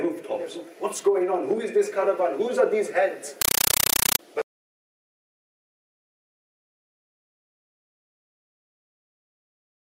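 From 3.41 to 4.19 s, a compressed stream played as audio replaces the sound. Undecoded data arrives as 8 ms noise bursts, 31.25 per second. Loud static chatters.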